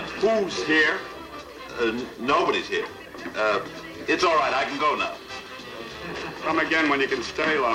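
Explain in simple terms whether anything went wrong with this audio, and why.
Yes: throughout, a grainy, gritty roughness follows the sound, worst in quiet parts, likely from low bit depth without dither, rounding the signal to just 8 bits.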